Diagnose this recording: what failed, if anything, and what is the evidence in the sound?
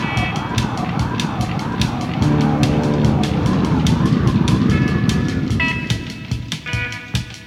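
Nothing in the signal points to a failure at any stage, from wiring and conversion through buffering, processing, transmission and playback.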